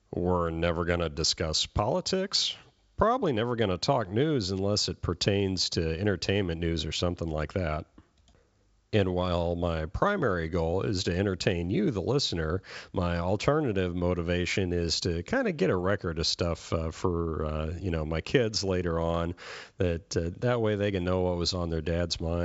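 No technical faults occur in this speech clip: the sound reaches up to about 7.7 kHz with nothing above it, which fits G.722 wideband telephone coding at its full 64 kbit/s rate, and any coding damage from that path is faint at most.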